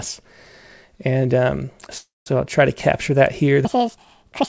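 At 1.98 s a call audio freeze sets in and lasts until 2.28 s. Packets were likely held up and the jitter buffer ran dry, so the last sound is stretched into a fading buzz that drops to about 190 ms of silence. The speech then resumes where it stopped, leaving a 0.28 s gap with nothing lost.

From 3.65 s to the end, a section at the wrong speed plays 1.74 times too fast, likely from being fitted to the wrong clock. Pitch rises with speed, by roughly ten semitones, so the voice turns high and hurried, still band-limited at 8 kHz by the call codec.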